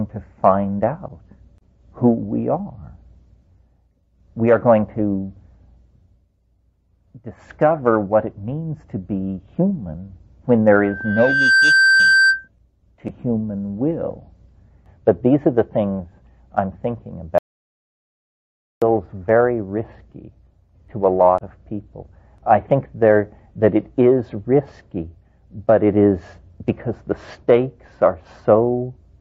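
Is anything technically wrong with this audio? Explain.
Yes. There are two clear faults.

From 10.79 to 12.48 s there is a loudspeaker feedback squeal. A steady tone at 1.6 kHz rises out of the sound. It swells over well under a second and ends up about 5 dB louder than the audio itself. A microphone was picking up the loudspeaker it fed. At that one frequency the loop gain passed unity, so the tone kept reinforcing itself until the amplifier limited it or the loop was broken.

From 17.38 to 18.82 s there is an audio dropout to silence. The sound cuts off abruptly and returns about 1.44 s later. The gap is silent, with no room tone or background underneath. Whatever occurred in that stretch is lost. The likely cause is a brief loss of the input signal, such as a disconnect or a momentary mute, while the recorder kept writing silence.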